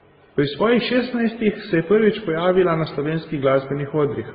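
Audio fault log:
Throughout: transcoding between lossy codecs. Speech is capped sharply at 4.8 kHz, and warbly, smeared artefacts from more than one codec are heard together, likely from repeated low-bitrate lossy encoding. A spectrogram shows a flat ceiling at 4.8 kHz over blotchy, patchy detail.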